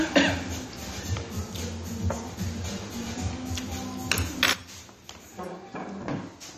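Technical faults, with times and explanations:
4.53 to 6.58 s, sudden gain jump: at 4.53 s the whole signal, background noise included, drops by about 15 dB in a single step and stays down to the end. The likely cause is a digital gain change applied instantly, without any ramp.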